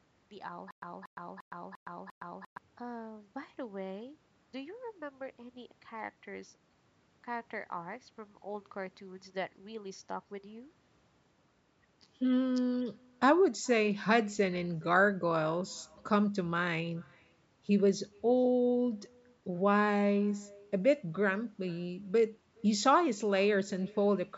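From the start and for the whole recording there is echo with no canceller. Each phrase is followed roughly 0.4 s later by a faint copy, about 28 dB below the direct speech, thinner than the original. The far end is evidently playing the call through a loudspeaker, its microphone is capturing that playback, and no echo cancellation is removing it before it returns across the network round trip.

Between 0.71 s and 2.58 s there is a stutter with silent gaps. A 0.23 s fragment plays, then about 0.11 s of digital silence, and the pair recurs at a steady 0.35 s interval, five times in all. The likely cause is a stalled player or stream that replayed its last buffered fragment on each retry before running dry. The audio that should have filled that span is missing.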